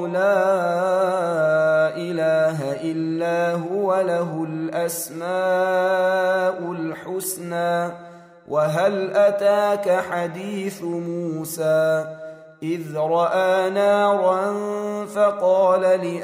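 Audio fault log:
Nothing stood out on listening to the clip.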